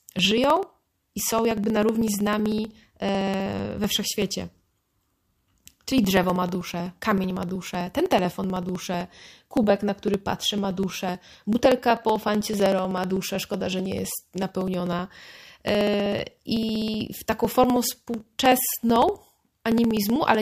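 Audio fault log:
0.06–20.35 s, periodic USB or driver dropouts: the USB bus or audio driver is blocked every 63 ms, and roughly a millisecond of audio is skipped each time, so a few hundred evenly spaced ticks run through the speech, audible only while there is signal.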